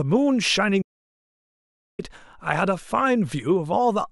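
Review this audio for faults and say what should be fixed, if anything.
The input feed to the recorder was likely interrupted, perhaps by a loose connection, a dropped link or an accidental mute, while the recorder kept writing silence in its place. The result is an audio dropout to silence from 0.82 s to 1.99 s: the speech stops abruptly, about 1.17 s passes in dead silence with no room tone at all, and the speech resumes mid-flow, with whatever was said in that gap missing. Secure cabling, wireless links and mute controls before recording, and monitor the input live so any loss of signal is caught and the take repeated.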